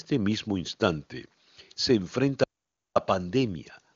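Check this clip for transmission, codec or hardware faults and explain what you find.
There's one fault here, an audio dropout to silence. From 2.44 to 2.96 s the speech cuts to silence for about half a second, with no room tone. Likely the input link or device dropped while the recorder kept writing silence. The band-limited top end, nothing above about 7.2 kHz, comes from the AMR wideband (HD Voice) codec, which sounds clean.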